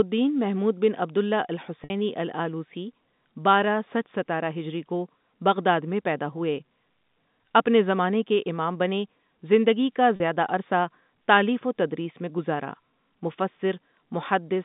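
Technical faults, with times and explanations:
1.84 to 1.90 s and 10.16 to 10.20 s, packet loss with pitch repetition. The first gap is about 60 ms, just before "الٓالوسی بارہ سچ ستارہ". The second is about 40 ms, between "امام بنے زندگی کا" and "زیادہ عرصہ تالیف و". The gap lengths fit three and two 20 ms packets. The receiver fills each hole by repeating the last pitch period. That gives a brief held, buzzy tone before the speech resumes. The narrow telephone band, heard through the G.711 line, is unaffected.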